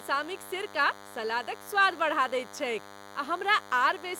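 Speech clip with DECT cordless phone buzz throughout. A thin, steady 100 Hz buzz with many harmonics sits about 20 dB below the speech. Nearby radio bursts every 10 ms get rectified in the audio circuit.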